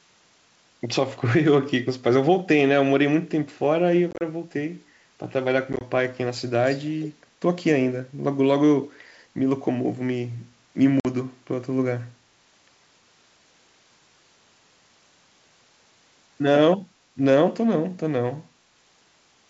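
Packet loss on an ADPCM call at 4.11 to 4.22 s and 5.73 to 5.81 s: about 70 ms and 40 ms are lost in short runs of up to 30 ms and 20 ms, which drop out as hard-edged silent gaps, then the decoder's predictor and step size restart out of step, so the speech resumes with brief distortion.

Echo leak at 6.65 to 6.79 s and 7.02 to 7.08 s: faint scraps of the voice return about 0.33 s late, roughly 20 dB down, likely from a loudspeaker's echo canceller letting residue through.

Packet loss recurs at 11.00 to 11.06 s, with a 50 ms hole.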